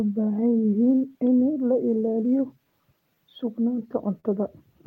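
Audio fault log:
Throughout: clock drift between sender and receiver. The sender's clock runs roughly 4% slow, so the receiver's buffer keeps draining and it must pad the stream with repeated pieces. On a waveform this shows as small, unevenly spaced duplicated stretches, heard as small timing hiccups recurring through the clip.
0.06–3.60 s: repeated timing corrections. The receiver keeps repeating short slices to make up for the slow sender, playing at 96% speed and adding about 150 ms in total. On a spectrogram, tiny copied segments and seams recur irregularly.
4.20–4.26 s: short stall from a late packet. A packet arrived late, the buffer ran empty, and the receiver held the last sound for 38 ms before resuming where it left off, with nothing lost. A spectrogram shows a brief frozen, smeared band.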